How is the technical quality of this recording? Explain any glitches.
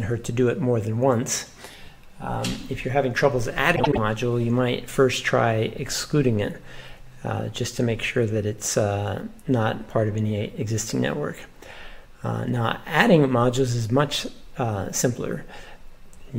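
There is one glitch: frames out of order. From 3.76 to 3.98 s, two neighbouring 78 ms blocks play swapped. This gives a garbled flutter.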